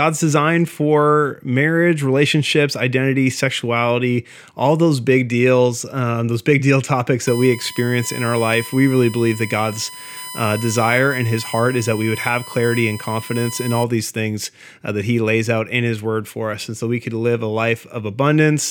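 USB whine runs from 7.27 to 13.84 s, starting just before "these things uh that". Current drawn in 1 ms bus frames leaks in as a steady 1 kHz tone, strongest at 9 kHz, roughly 15 dB below the speech.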